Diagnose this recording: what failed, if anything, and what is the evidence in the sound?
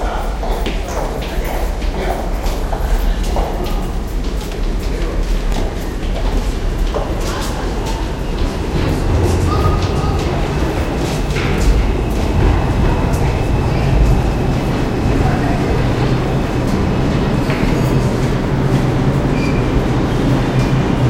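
The fault is overlapping chunks, at the buffer or chunked-processing stage. Short stutters occur at 5.52, 11.54 and 17.56 seconds. They are spaced almost exactly 6 seconds apart, which points to the audio being handled in 6-second chunks. At each join, the next chunk starts 20 ms before the previous one ended. That 20 ms slice of sound plays twice. The repeat breaks the waveform's continuity, so each join is heard as a brief click or stutter.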